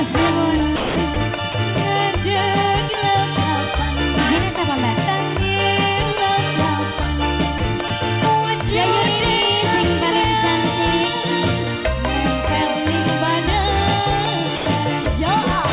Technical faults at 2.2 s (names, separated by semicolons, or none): none